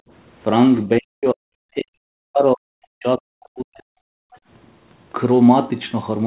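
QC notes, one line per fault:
0.0–0.1 s and 4.13–4.42 s, background gated by the echo canceller: with the loudspeaker playing, the canceller clamped the microphone hard. The room sound drops by about 29 dB for roughly a tenth of a second at the start, then by about 40 dB for roughly a fifth of a second later, returning as the canceller releases.
0.85–1.45 s and 1.74–3.85 s, speech suppressed in double talk: both ends were likely talking at once, so the canceller could not separate the near talker from loudspeaker echo and turned everything down. The speech sinks by roughly 40 dB, about half a second in the first stretch and about two seconds in the second.
4.34–4.38 s, other side's voice leaking through: the canceller likely failed to remove all of the loudspeaker signal from the microphone. A brief scrap of a second voice, roughly 35 dB below the talker, slips through inside the later gated stretch, and like the rest of the call audio it carries nothing above 4 kHz.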